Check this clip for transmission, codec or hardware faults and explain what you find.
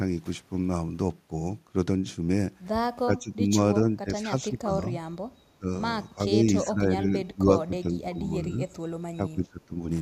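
The speech repeatedly dips in level at 3.05–3.56, 3.96–4.87, 5.59–5.68, 6.16–6.45, 6.62–8.60 and 9.16–9.78 s. It usually sinks by about 15 to 20 dB, only slightly near 6.2 s. This is likely speech suppressed in double talk: an echo canceller could not separate the talker from overlapping far-end echo and attenuated both.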